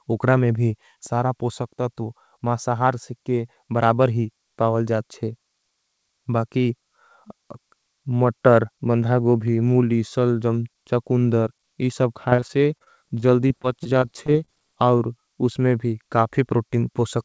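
Repeated packet loss (robotic sound) runs from 12.30 to 14.50 s, right after "सलजम चकुंदर इस अब". Over a dozen short holes, none longer than 30 ms, are patched by extending the preceding sound. About 11% of the stretch is filled this way, so the speech turns choppy.

A short stall from a late packet follows at 14.98 to 15.01 s, just before "उसमें भी". The jitter buffer ran dry, and the last sound was held for 17 ms before playback resumed. Nothing is lost, but a sound is briefly drawn out. Across the clip, the G.722 call path leaves nothing above 8 kHz.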